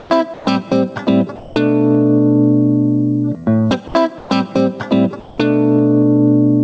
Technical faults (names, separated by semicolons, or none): gain pumping; sound dropped by the voice detector; comfort noise in place of the background; short concealed packet loss